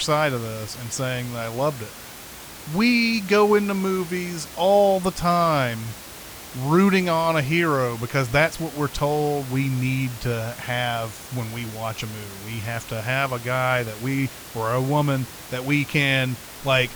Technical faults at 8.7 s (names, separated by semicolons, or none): none